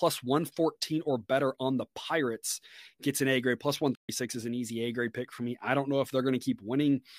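At 3.95 s the speech falls silent for 136 ms, then resumes at 4.09 s with "is an easy". This playback stall likely comes from the player running short of data.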